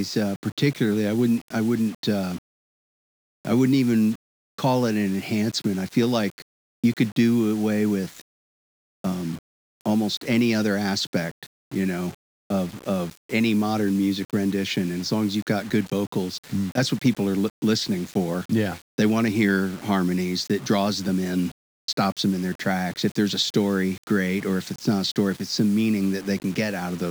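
Speech runs the whole 27 seconds with grainy, rasping distortion that rides on the sound itself, the mark of low bit depth without dither. The coarseness fits about 6-bit rounding, likely done with no dither. The error sits roughly 25 dB below the signal. Unlike steady hiss from dithered quantisation, this grit changes with the sound and is gone in pauses, while the quietest tails crackle or drop out.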